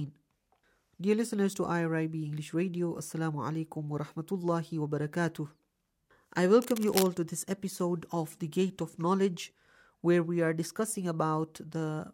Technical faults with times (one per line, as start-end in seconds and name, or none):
6.62-7.07 cable scratch noise